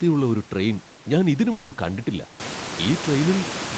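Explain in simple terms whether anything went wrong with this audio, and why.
Something likely went wrong on the network between 1.51 and 1.73 s, a long network dropout. For about a fifth of a second no audio reached the listener's end. Rather than go silent, the receiving software stretched out the last bit of sound it had, so that stretch comes out as a fading, buzzy smear instead of real speech. When the audio resumes at 1.73 s, the part sent during the gap is simply missing.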